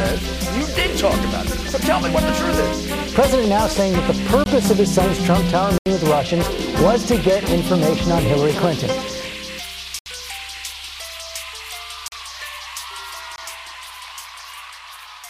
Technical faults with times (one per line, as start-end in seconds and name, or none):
4.44 block of digital silence
5.78-5.86 block of digital silence
9.99-10.06 block of digital silence
12.08-12.12 block of digital silence
13.36-13.38 block of digital silence